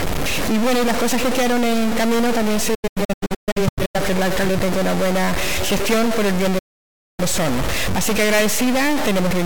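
A noise or distortion runs through the whole clip. It rides on every sound and does not come and go. It is the kind a stuck bit leaves, most likely one data bit held at 0 or 1 by a broken line or converter. About half the sample values end up off by that bit's weight, following the waveform. Quiet stretches also fill with a hiss that tracks the sign of small values.

At 2.74 s the first digital broadcast dropout begins. The sound breaks into several short holes until 4.0 s. Each hole fades out in about 8 ms. The longest lasts 128 ms. Together they remove about 0.68 s of audio spread over about 1.2 s. A second dropout runs from 6.58 to 7.23 s. It again fades in about 8 ms and removes about 0.6 s. In both cases the receiver stopped getting good frames and muted until clean ones returned. The sound sent during those gaps is lost.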